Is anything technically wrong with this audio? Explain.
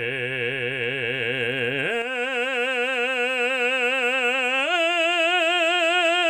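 Yes. One channel drops out from 2.02 s to the end of the music. The audio abruptly falls by about 6 dB and stays down. The likely cause is one stereo channel going silent. When the two channels are summed, material shared by both is left with half its contribution, which produces the 6 dB loss.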